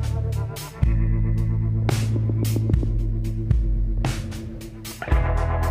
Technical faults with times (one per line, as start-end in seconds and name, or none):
none